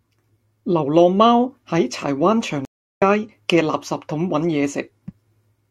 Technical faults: stream reconnect

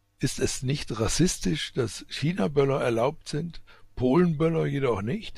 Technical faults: hard clipping

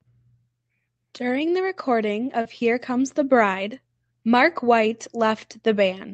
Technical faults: short concealed packet loss

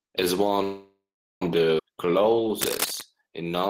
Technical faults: call audio freeze; skip ahead; jitter buffer slow-down; cable scratch noise

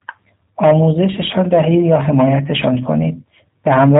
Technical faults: G.729 codec

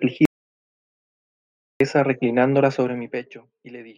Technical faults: audio dropout to silence; zipper noise

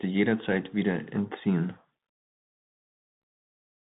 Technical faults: Bluetooth CVSD headset codec; unconcealed Bluetooth headset packet loss

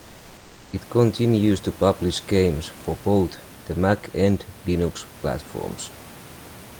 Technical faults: comfort noise in place of the background

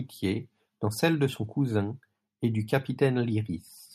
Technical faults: none

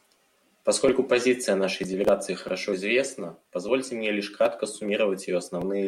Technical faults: none

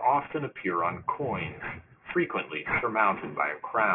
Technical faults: aliasing

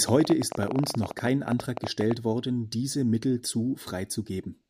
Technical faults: train of clicks

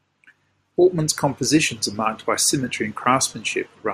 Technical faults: none

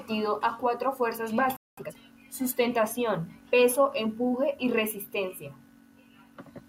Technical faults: playback stall; time-compressed catch-up

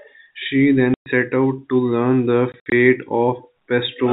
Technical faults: packet loss filled with silence

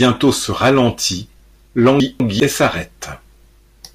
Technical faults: chunks out of order

